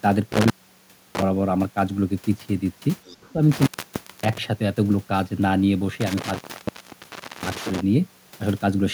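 From 0.32 to 1.22 s, an intermittent contact breaks the signal. A loose plug or cable opens for about 650 ms. The speech cuts out with crackle at each edge. Faint hiss fills the gap. The same fault returns later.

Between 3.05 and 3.33 s, a second voice leaks through faintly, about 25 dB below the talker. It is likely the other side's voice leaking through from the loudspeaker, left behind by the echo canceller.

From 3.21 to 3.38 s, the talker's speech dips by about 10 dB. The losses add up to roughly 70 ms. This is likely speech suppressed in double talk. The echo canceller turns the talker down while both sides overlap.

The intermittent contact strikes again from 3.52 to 4.38 s, open for about 570 ms. It then runs from 6.01 to 7.81 s, open for about 1.05 s. Each time brings crackling edges and a hiss-filled gap.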